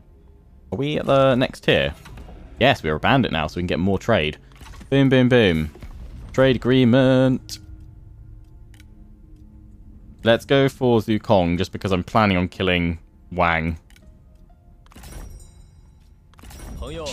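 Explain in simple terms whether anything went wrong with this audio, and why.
Nothing stood out as wrong when listening to this audio; it sounded clean the whole way through.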